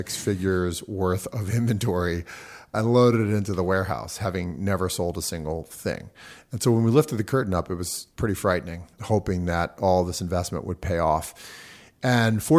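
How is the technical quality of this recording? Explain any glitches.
No technical glitches can be heard in the recording. The speech continues without any interruption or defect worth pointing out.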